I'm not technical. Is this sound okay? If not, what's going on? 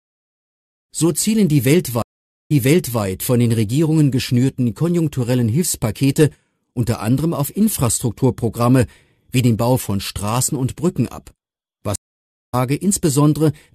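No. There are two stream reconnects. The connection dropped and restarted mid-playback. At 2.02 s the sound stops for about half a second, then repeats about half a second. At 11.96 s it stops for about 0.6 s and skips ahead roughly 0.7 s.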